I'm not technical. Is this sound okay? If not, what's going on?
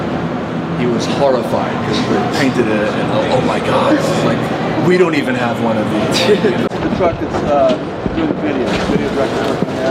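No, not entirely. From about 6.67 to 8.67 seconds the sound goes dull and muffled, as if a blanket were thrown over it. That's de-emphasis applied wrongly: a treble cut meant to undo a boost that was never there, so the high end gets smoothly rolled away.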